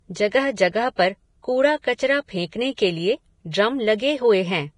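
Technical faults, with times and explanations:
Throughout, Vorbis compression: the speech has a hard ceiling, with nothing above 10.6 kHz, and the treble that remains is hissy and grainy. Sibilants turn to coarse noise, voiced tones sound roughened, and consonant attacks blur. The likely cause is heavy lossy coding, consistent with a rate near 30 kbps. The encoder drops the top band outright and quantises the upper residue so coarsely that fine detail is replaced by noise of similar energy.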